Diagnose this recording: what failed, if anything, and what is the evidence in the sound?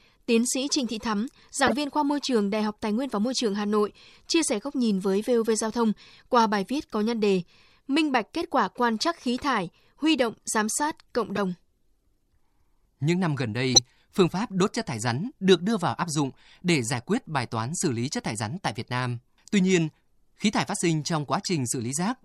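At the codec stage, corrupt frames were decoded: flipped bits in a few compressed frames were played anyway, putting energy at the wrong frequencies for each damaged frame. It is audible at 1.63–1.73 s before "viên khoa môi trường", 11.36–11.38 s, 13.73–13.79 s after "năm gần", and 21.42–21.46 s after "thải phát sinh trong".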